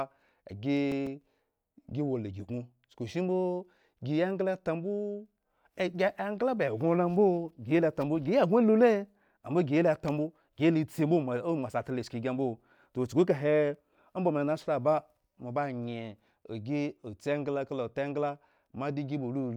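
From 0.62 to 1.36 s, six short CD scratch ticks cut into the speech, the longest lasting only a few milliseconds. A blemish on the disc is costing more data than error correction can restore on each rotation, so the player patches or silences those samples. The regular spacing, roughly seven or eight per second, sets it apart from the random crackle of vinyl dust or the single dropouts of a network glitch.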